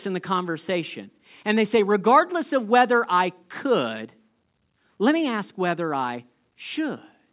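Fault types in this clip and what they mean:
Nothing stood out on listening to this speech recording.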